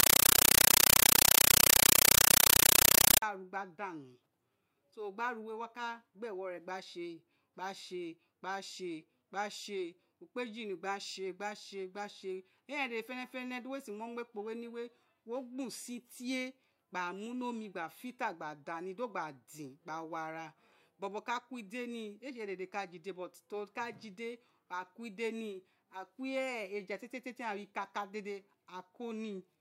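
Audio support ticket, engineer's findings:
0.00–3.22 s: compressed stream played as audio. Loud chattering static in 8 ms bursts, 31.25 Hz; undecoded AC-3 frames. Fixed frame cadence rules out broadband noise.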